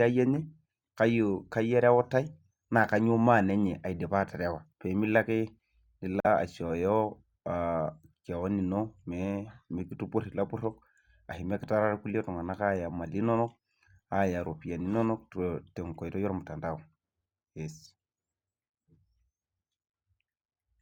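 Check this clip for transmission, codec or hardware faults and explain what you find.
One transmission fault is present in this speech. At 6.2 to 6.27 s the sound drops to silence, then resumes further on as though playback had continued. The likely cause is a Bluetooth dropout: packets reached the headphones too late and were discarded.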